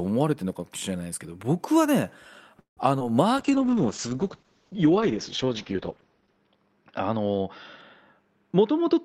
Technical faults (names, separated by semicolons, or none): call audio freeze; short concealed packet loss; call bitrate drop; jitter buffer speed-up